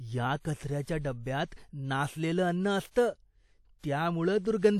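From start to finish the speech carries a ringing, washy quality, with a hiss that swells and fades along with the voice, and nothing survives above 17.3 kHz. This is likely WMA compression at a low bitrate, plausibly around 48 kbps. A long-block transform spreads its quantisation noise over tens of milliseconds and drops weak spectral detail. That smeared, breathing noise is what sets it apart from a simple low-pass filter, which would only dull the top.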